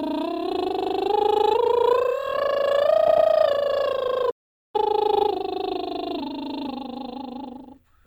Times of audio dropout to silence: 4.31-4.74

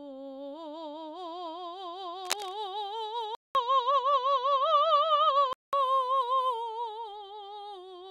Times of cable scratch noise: 2.25-2.53

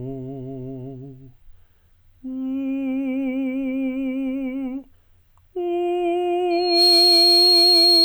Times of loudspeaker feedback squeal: 6.50-8.04

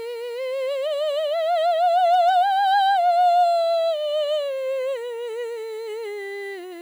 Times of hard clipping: 2.13-2.30

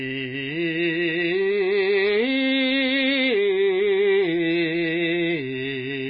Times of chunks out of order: none

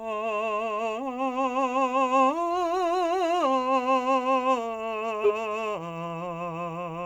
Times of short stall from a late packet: none

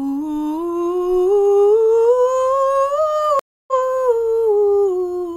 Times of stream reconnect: 3.39-3.73

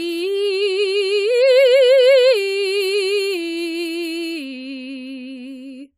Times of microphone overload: none

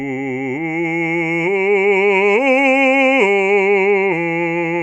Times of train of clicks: none

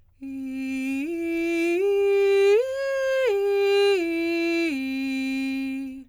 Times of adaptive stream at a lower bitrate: none

